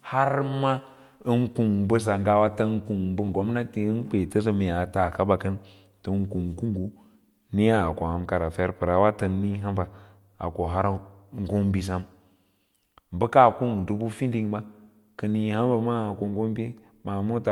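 At 3.28 s the speech briefly garbles, a clear case of frames out of order. Two adjacent single frames were decoded in swapped order, which fits blocks of about 10 ms each, so this tiny stretch plays with its halves exchanged. Unlike a dropout or a repeated frame, nothing goes silent and nothing doubles. The timing after the flutter stays intact because no audio is lost or added.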